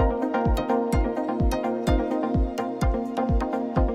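From 0.38 s to the end at 3.94 s, faint ticks repeat about every third of a second, roughly ten in all. These are clock slip clicks. They likely come from two unsynced clocks differing by about 70 ppm, so single samples drop or repeat.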